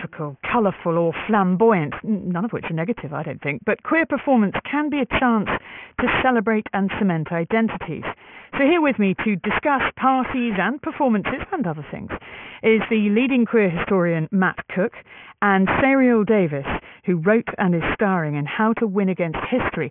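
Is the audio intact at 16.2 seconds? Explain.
No. Aliasing runs through the whole clip, 16.2 s included. The rate was lowered without filtering first, which fits a 6 kHz sample rate. Content above 3 kHz folds back as unrelated pitches about 10 dB below the signal, sounding gritty and metallic.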